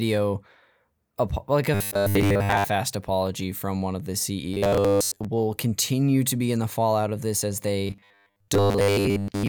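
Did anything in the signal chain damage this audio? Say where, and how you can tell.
Yes. Robotic sound from repeated short buffers appears at 1.74–2.66 s after "like a", at 4.54–5.25 s after "from one of the", and from 7.87 s to the end after "fallout of this as". A rigid 100 Hz buzz runs through these spans: 10 ms segments loop while most real audio is skipped, likely a buffer underrun.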